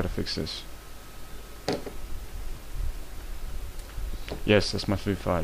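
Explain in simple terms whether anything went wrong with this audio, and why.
Nothing went wrong here; the signal arrives intact, with no breaks, glitches or distortion anywhere in it.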